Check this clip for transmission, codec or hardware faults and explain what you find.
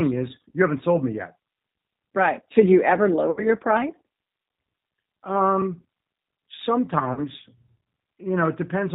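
Two faults are present: plainly audible low-bitrate speech coding across the whole clip, and two brief dropouts covered by the decoder's concealment.

The G.729 codec damage is plainly audible from start to finish. The decoder rebuilds each 10 ms frame from a vocal tract filter, a pitch predictor and a few pulses, which fits the 8 kbit/s G.729A variant. This makes the speech rough, slightly synthetic and dull. On a spectrogram, energy stops sharply at 4 kHz, and harmonics look smeared and blocky from frame to frame.

VoIP packet loss concealed by the speech codec occurs twice. The first runs from 3.31 to 3.46 s, just after "you ever", and replaces about 60 ms of lost audio, which fits three missing packets. The second runs from 7.13 to 7.22 s and covers about 40 ms, which fits two. In both, the decoder extends its last pitch and filter while lowering the gain, so the sound turns into a fading buzzy tone or coloured noise, and the speech stays weak briefly afterwards. 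The spectrogram shows the last spectrum held and fading out, and the waveform shows a tapering envelope.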